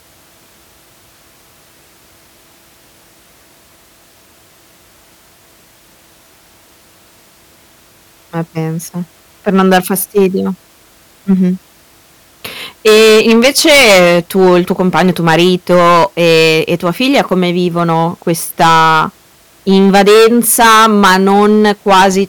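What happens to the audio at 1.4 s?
Nothing goes wrong at 1.4 s; the speech runs on intact through that moment.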